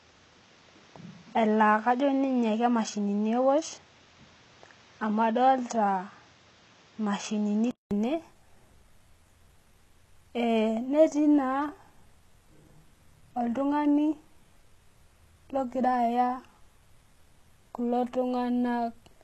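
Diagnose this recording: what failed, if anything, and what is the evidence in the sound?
Input switched to a poorer device, from 0.0 to 7.91 s, at the capture and driver stage. For those first seconds the speech has nothing above 7.4 kHz and sounds dull and boxy, with a noise floor about 35 dB below the voice. At 7.91 s a 200 ms silence gives way to fuller sound. The level stays the same. This is likely the system moving off a narrower-band microphone or headset call profile onto the better input.

HE-AAC compression runs through the whole clip, at the codec stage. The spectrum stops at 12.3 kHz, and the codec damage is plainly audible: sibilants come out gritty and metallic. That fits a low bitrate of around 16 kbps, likely HE-AAC, where only the lower band is truly coded. The treble is rebuilt by copying lower bands upward under a coarse envelope, so its harmonics no longer line up with the voice beneath.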